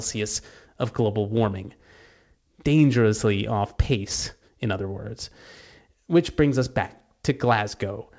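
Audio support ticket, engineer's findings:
No faults found in this speech clip. The call path behaves as a G.722 link would, with nothing audible above 8 kHz, which fits a 64 kbps wideband codec.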